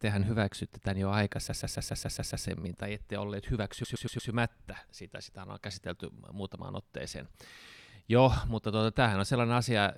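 At 1.47 s, right after "hyväksytte tämän jo", a 139 ms block of repeated frames loops seven extra times, adding nearly a second of stutter. It happens again at 3.83 s, where a 116 ms block loops four times after "tai ette olleet".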